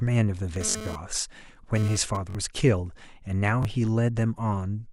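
From 0.56 to 2.17 s there is GSM phone buzz. A 2G phone nearby was sending radio pulses 217 times a second. The audio circuit rectified those pulses into sound. The result is a hard, raspy 217 Hz buzz with many harmonics. It sits about 10 dB below the speech and has nothing to do with it. The phone was moving data, so the buzz comes and goes rather than holding steady.

A repeated buffer appears at 0.70 to 0.75 s, while the buzz is still running. New audio arrived late, so the device replayed its last 21.33 ms block, which fits a 1024-sample buffer. That block plays twice more, with a hard join each time, and about 40 ms of real audio is lost. It sounds like a brief stutter. The same fault returns at 2.30 to 2.35 s, again with two extra plays and about 40 ms lost. At 3.63 to 3.65 s there is a single extra play, losing about 20 ms. That one is shorter.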